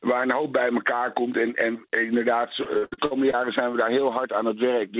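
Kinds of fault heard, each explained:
Repeated packet loss (robotic sound): from 2.64 to 3.35 s, six dropouts, the longest 73 ms, are each patched by extending the preceding sound. About a third of that stretch is filler, producing a choppy stutter in audio already band-limited below 4 kHz.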